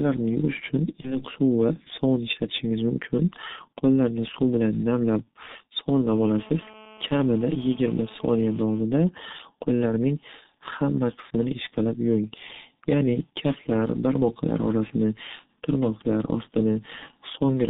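The whole clip is speech carried through the G.723.1 codec at 6.3 kbit/s, and the damage is heavy. The line passes roughly 150 Hz to 3.7 kHz, so everything above is gone. The voice sounds muffled and hoarse. Consonants smear together. The codec works in coarse 30 ms steps and updates its model of the voice slowly. Fast changes in the speech therefore get blurred.

At 1.01 s, right after "yuvish uchun", a gap appears. It is VoIP packet loss concealed by the speech codec. About 30 ms of audio went missing, which fits a single lost frame. The decoder filled the hole by extending its last pitch and filter at falling gain. That gives a brief buzzy smear. The voice stays weak and distorted until about 1.23 s, when "suv va sovun ishlatishingiz" comes through.

The same concealment happens again from 5.25 to 5.27 s, just after "qo'llarni suv bilan namlab". Again about 30 ms is lost, pointing to one missing frame. 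The decoder stretches the last sound into a short tonal blur. This time the recovery is quick.

From 6.07 to 8.83 s, a GSM phone buzz sits under the speech at about 24 dB below it. A 2G handset on a call transmits in bursts about 217 times a second. The audio circuitry rectifies those radio pulses. The result is a hard, raspy, steady buzz at 217 Hz, rich in harmonics. It has nothing to do with the speech.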